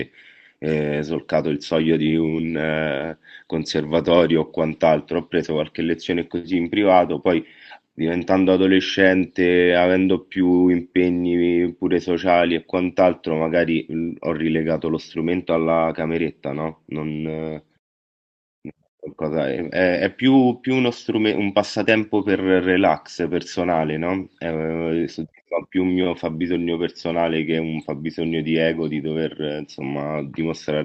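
Nothing's wrong here: it's a speech recording that came over a WebRTC call, and the traces of that are the usual coding noise and the top end rolling off around 8 kHz, as you'd expect from an Opus call at modest bandwidth.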